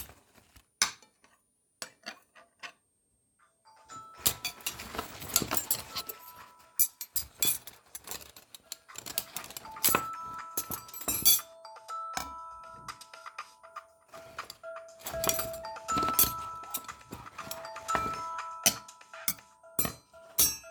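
A switching power supply in the recording chain drops into an audible burst mode for the whole clip, and its switching frequency leaks into the audio as a switching supply whistle. The result is a thin, high whistle, wandering between about 8.5 kHz and 9.6 kHz, around 10 kHz. It sits roughly 45 dB under the sounds, faint but continuous behind them from start to finish.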